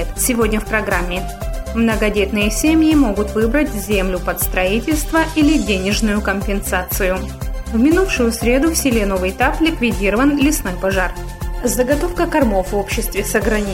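No technical faults can be heard anywhere in the recording, and the signal stays steady and intact throughout.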